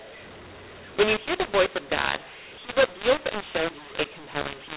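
Mu-law and A-law mixed up runs from start to finish: the speech was coded as G.711 A-law but decoded as mu-law, scrambling sample levels. Loudness jumps harshly, quiet samples rise well above silence, pauses fill with noise, and the 4 kHz telephone band remains.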